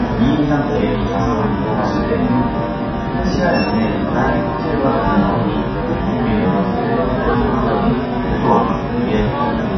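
From start to finish the sound is dull and smeared, with a watery, fizzy warble and nothing above 6 kHz. This is likely heavy AAC compression, consistent with AAC-LC starved at roughly 12 kbps. A spectrogram shows a hard ceiling at 6 kHz.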